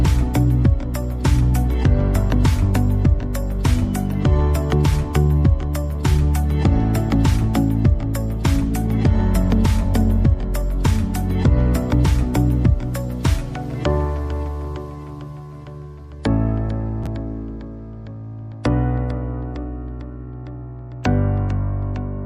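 At 17.04 to 17.07 s there is a brief jumbled flicker. These are chunks out of order: one 10.7 ms chunk plays two chunks late, after the two that should follow it. Nothing is lost, but the shuffle creates three hard joins.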